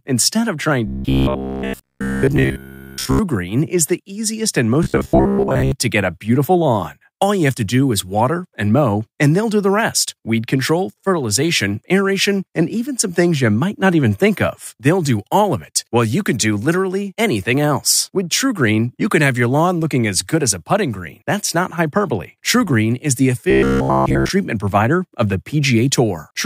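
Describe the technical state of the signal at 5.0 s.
At 5.0 s the speech has turned into robotic sound from repeated short buffers, from 4.83 to 5.72 s: a rigid, metallic buzz near 66.7 Hz, likely from a roughly 15 ms slice replayed over and over while most real audio is skipped. The fixed buzz pitch separates it from ordinary dropouts or stutter.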